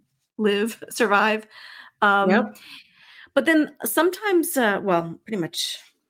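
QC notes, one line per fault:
Nothing stood out on listening to the speech in this clip.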